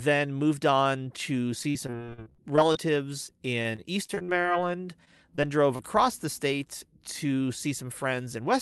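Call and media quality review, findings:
Repeated packet loss (robotic sound), 1.63–2.77 s, right after "moved on to": choppy speech with pieces missing, 14 gaps, longest about 46 ms, concealment covering 29% of the span. Receiver keeps stretching the last sound across each hole, then the next hole lands soon after. Second burst 3.27–5.81 s, leading into "the state": 14 gaps again but shorter, longest 28 ms, about 10% concealed. Probable component: network path upstream of the jitter buffer.

Jitter buffer speed-up, 7.25–8.36 s, just after "the state": speech runs about 6% fast at the same pitch and sounds a bit hurried. Buffer was holding more than its target, probably after late packets arrived together, so it trimmed short pitch-period chunks over and over to catch up, roughly 70 ms removed in total. Component: receive-side jitter buffer. Codec path sounds like Opus at a rate around 40 kbps, top end stops near 12 kHz.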